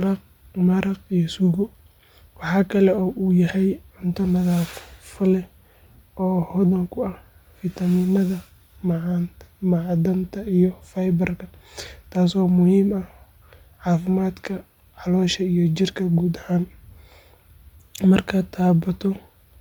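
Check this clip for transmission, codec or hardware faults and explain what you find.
One fault runs through the whole clip. Bluetooth LC3 compression, present throughout, gives the speech a plainly audible breathy, grainy edge. The likely cause is the codec dropping upper-spectrum detail in 10 ms transform frames and filling the gaps with noise, which fits a 48 kbps stream. Nothing sounds above 20.2 kHz.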